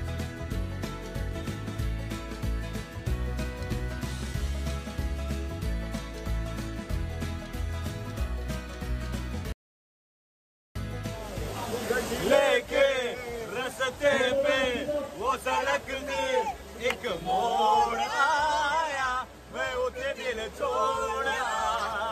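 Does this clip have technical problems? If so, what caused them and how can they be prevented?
Yes. An audio dropout to silence runs from 9.52 s to 10.75 s: the sound breaks off mid-flow and returns about 1.23 s later, likely from a lost input link or brief mute. The waveform shows a flat line, the spectrogram a blank vertical band. Monitoring input connections and mute states during recording prevents this.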